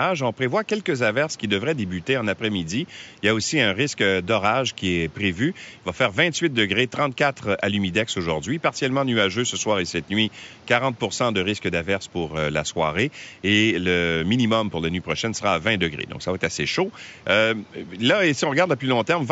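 The speech signal has no technical faults, and the only other sound is the room's own background noise, about 28 dB below the speech, which belongs to the recording rather than to any failure in the chain.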